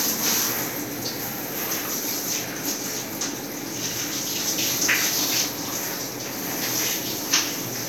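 Sound recording with no technical faults audible anywhere in the clip.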